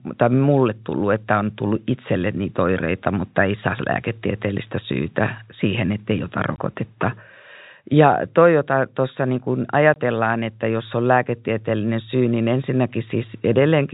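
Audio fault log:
6.56–6.58 s and 9.94–9.96 s, packet loss filled with silence: two 20 ms dropouts, the first right after "syytä siihen ettei ota", the second between "jota tuossa niin kun" and "että jos on lääketieteellinen". Each gap length fits two consecutive 10 ms packets going missing. The receiver inserted digital silence instead of concealing the loss, so the speech cuts off abruptly and restarts with hard edges. The gaps sit in the narrowband G.711 telephone sound, which has nothing above 4 kHz.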